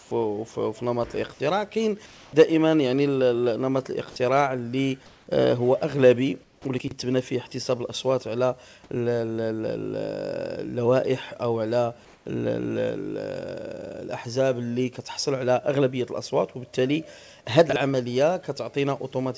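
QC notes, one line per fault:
0.00–0.11 s, 2.06–2.33 s, 5.06–5.27 s, 6.44–6.65 s, 12.05–12.26 s: comfort noise in place of the background. In each pause the natural background sound gives way to a steady, featureless hiss lasting 110 to 270 ms. The level shifts by about −4 dB to about +2 dB. The likely cause is the sender going silent between sounds while the receiver synthesises noise.
6.78–6.91 s and 17.70–17.76 s: chunks out of order. A 32 ms piece of audio plays after material that should follow it, about 96 ms late at 6.78 s and 32 ms late at 17.70 s. The hard joins make a brief jumbled stutter, over a call path with nothing above 8 kHz.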